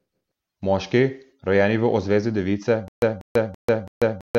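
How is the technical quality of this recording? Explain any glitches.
The recording breaks down near the end with a stutter with silent gaps. From 2.88 s to the end, a 190 ms fragment of speech repeats four times, each followed by about 141 ms of digital silence, a steady 332 ms cycle. A stalled player or stream likely kept replaying its last buffer before running empty, so the speech that should follow is lost.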